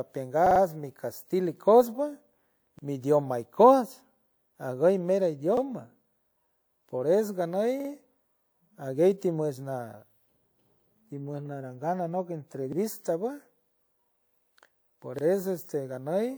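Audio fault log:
0.46–0.60 s, 2.79–2.83 s, 5.57–5.62 s, 7.80–7.90 s, 12.73–12.77 s, 15.19–15.23 s: repeated buffer. New speech audio arrived late, so the device replayed its last chunk of about 46 ms. That length fits a 2048-sample buffer. The chunk plays three extra times at 0.46 s, twice at 7.80 s, and once at each other point. Each hard join makes a short stutter. One comes just before "mi idioma", another just after "aguy mero". Little or no audio is lost.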